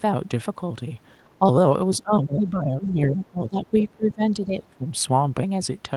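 Speech suppressed in double talk at 1.3 to 1.45 s and 1.97 to 3.74 s: the talker's speech dips, by roughly 10 dB and then 15 dB. The likely cause is an echo canceller that could not separate the talker from loudspeaker echo while both sides spoke, and so turned both down.

The other side's voice leaks through at 2.83 to 2.87 s and 3.81 to 3.87 s as brief, faint scraps, roughly 20 to 25 dB below the speech. This is likely echo the canceller left in the microphone signal.

Speech is suppressed in double talk again at 3.91 to 4.24 s, sinking by up to roughly 20 dB, and at 4.46 to 4.86 s by roughly 15 dB. This is likely the same overlap clamping down on the talker.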